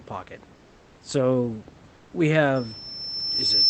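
Speech over a call path with two faults. From 0.55 to 0.97 s and again from 1.93 to 2.11 s, the room background gives way to a steady, featureless hiss about 1 to 2 dB quieter: comfort noise in place of the background, likely from discontinuous transmission filling pauses with synthetic noise. From 2.55 s to the end, a loudspeaker feedback squeal at 5.3 kHz swells over roughly a second to about 10 dB above the speech, as the microphone picks up its own loudspeaker and the loop gain at that frequency exceeds one.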